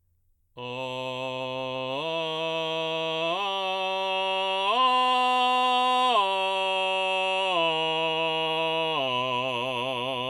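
No technical faults occur at any point in this music, so there is nothing to describe in time order.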